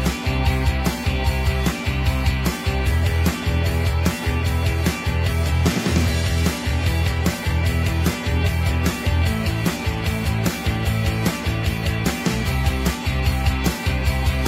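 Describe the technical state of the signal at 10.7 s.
At 10.7 s the signal is intact, with no audible dropout, distortion, glitch or other technical fault.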